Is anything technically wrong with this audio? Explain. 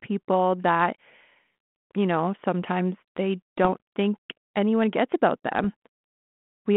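Yes. Short rough pops with brief jumps in level break into the speech twice: from 3.63 to 3.74 s, between "you know sometimes they" and "think anyone gets about", and from 5.59 to 5.67 s, just after "think anyone gets about". These are bit errors on an ADPCM link, here the 32 kbit/s G.726 line that limits the band to about 150 Hz to 3.4 kHz. Only a very small fraction of bits is flipped. Each wrong bit also knocks the decoder's adaptive step size and predictor off track, so the damage rings on for several milliseconds instead of staying a single click.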